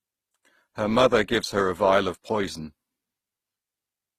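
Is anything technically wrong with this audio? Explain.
Yes. Throughout the speech, the sound shows transcoding between lossy codecs. Two different sets of compression artefacts are heard together. The narrow top end points to a low-rate Opus-style encode, likely re-encoded afterwards with HE-AAC, which added its own artefacts.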